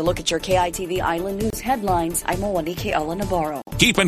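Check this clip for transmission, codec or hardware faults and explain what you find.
Two gaps at a join of encoded pieces turn up, at 1.50 to 1.53 s (about 26 ms) and at 3.62 to 3.67 s (about 52 ms). The audio was encoded in separate pieces and butted together untrimmed, so each encoder's start-up delay and final-frame padding survived as silence. The result is a brief dropout in continuous sound with smeared edges, after which the sound resumes exactly where it broke off.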